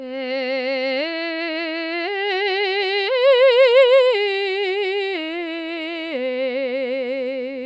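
No technical faults are audible.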